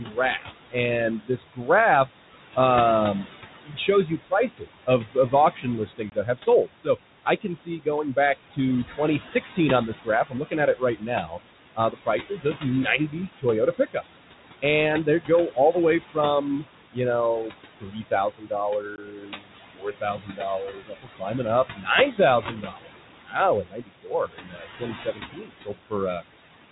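Noise suppressor artifacts run through the whole clip: the suppressor pulls what it judges to be steady room noise down by about 18 dB frame by frame, so the background sinks in pauses and swells back under the speech.

Speech cut by the noise suppressor occurs from 0.05 to 2.57 s, 3.64 to 14.03 s and 14.62 to 26.23 s. The suppressor mistakes quiet speech for noise and drops it by up to about 18 dB, swallowing soft consonants and word endings for roughly half a second, three seconds and four seconds in total respectively.

Packet loss on an ADPCM call leaves a 20 ms hard-edged hole at 6.10 to 6.13 s and another at 18.96 to 18.98 s, each consistent with one lost packet. The decoder's predictor and step size fall out of step with the sender's, so speech resumes with brief distortion before settling.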